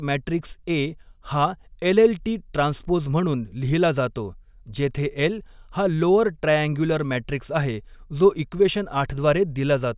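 Nothing goes wrong anywhere in this bit of speech; there's simply no technical fault to point to.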